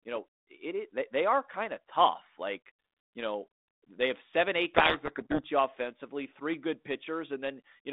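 A codec payload misread hits from 4.74 to 5.46 s: the G.726 code words arrive in reversed bit order, so the decoder buries the speech in harsh distortion.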